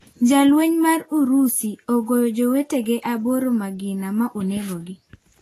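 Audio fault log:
Throughout: low-bitrate audio saved at a high bitrate. Nothing is heard above 14.1 kHz, and the speech keeps the artefacts of a heavy first encode. The likely cause is a roughly 31 kbit/s file re-encoded as high-bitrate MP3, which cannot restore lost detail.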